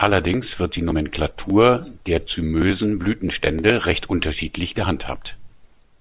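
Speech, with nothing technically wrong with it.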